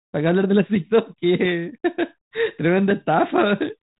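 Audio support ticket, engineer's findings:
No faults found; G.726 path at 32 kbit/s normal.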